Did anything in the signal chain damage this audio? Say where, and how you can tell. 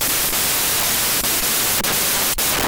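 Yes. The damage is at the sample-format conversion stage, throughout: a wrong sample width, with 16-bit speech read as packed 24-bit. Loud broadband noise buries the speech, which runs 1.5 times fast and high. Mismatched bytes form many values, and the raised speed and pitch separate this from plain clipping or dither noise.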